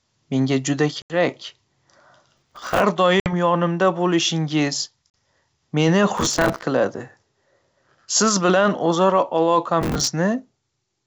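At 1.02 s, just after "menga juda", packet loss on an ADPCM call cuts an 80 ms hard-edged hole. The speech then returns slightly distorted while the decoder's predictor resettles. From 2.30 to 2.84 s processor overload crackle sets in: small buffers of around 5 ms repeatedly miss their deadlines and replay old audio, giving a gritty tearing over continuous sound rather than one clean gap. Packet-loss holes recur at 3.20 s (60 ms, just before "yonimda bo'lishingiz") and at 5.10 s (40 ms, just after "yonimda bo'lishingiz"). Crackle bursts return at 6.17 to 6.64 s and 9.82 to 10.08 s, all over the clear G.722 wideband band.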